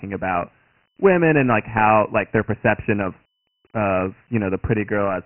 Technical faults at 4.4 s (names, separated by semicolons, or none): Dialogic VOX ADPCM